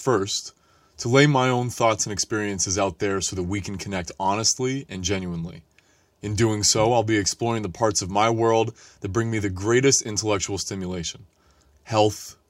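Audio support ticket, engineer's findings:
Listened to the whole speech clip and found nothing to flag, so there's no fault to chase on this one.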